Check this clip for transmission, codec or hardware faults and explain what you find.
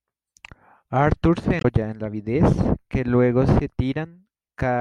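There is one fault, in the compressed data. From 1.58 to 1.65 s there is damaged data in the compressed stream: corrupted bytes garble the frames there, so the decoder misreads them and loses sync until it finds the next valid frame header. It sounds like a brief glitch just before "en las vides que".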